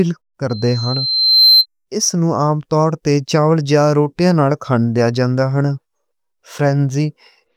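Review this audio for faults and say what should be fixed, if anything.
Loudspeaker feedback squeal, 0.49–1.66 s: loop gain above one lets a 4.1 kHz tone build for about a second. Cut gain or reposition the microphone.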